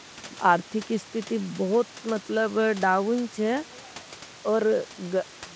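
Speech with room noise about 21 dB below it, passed through a call link whose cut-off at 8 kHz fits a G.722 wideband codec, and no technical faults found.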